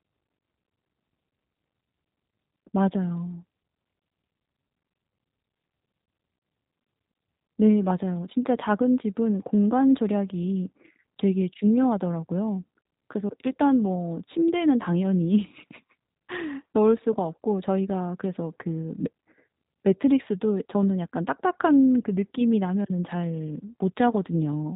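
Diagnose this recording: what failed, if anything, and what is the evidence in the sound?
The failure is at the codec stage: the speech passed through G.729, and the damage is plainly audible for the whole clip. Nothing above 4 kHz survives, and the slightly rough, synthetic texture fits an 8 kbit/s stream rebuilt from a vocal-tract filter, pitch predictor and sparse pulses.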